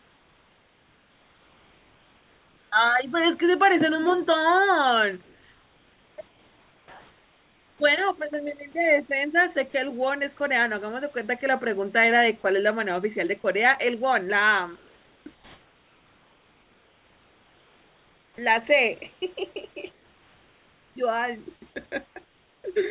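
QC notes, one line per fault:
0.00–2.72 s and 6.28–7.80 s, comfort noise in place of the background: The sender most likely stopped transmitting during these pauses under discontinuous transmission, so the receiver generated synthetic noise in the RFC 3389 style instead of passing the real room background. The actual background, about 38 dB below the loudest speech, gives way to a flat, featureless hiss about 3 dB quieter. It lasts 2.72 s and then 1.52 s before the real background returns with the speech.
9.70–10.40 s and 14.76–22.64 s, sound chopped by the voice detector: The sender's voice detector likely toggled between sending and muting several times in each stretch, so quiet syllable edges and low-level passages were replaced with comfort noise. The first stretch loses only about 60 ms in short bites. The second loses about 5.24 s across nearly eight seconds, so the speech sounds clipped.
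12.42 s, sound dropped by the voice detector: The voice detector likely mistook a quiet moment of speech for background and stopped sending for an instant. The receiver filled about 20 ms with comfort noise, and roughly 10 ms of real sound disappears. It is heard as a tiny dip of steady noise in the speech before transmission resumes. The narrow band of the call path, with nothing above 4 kHz, fits G.711 mu-law.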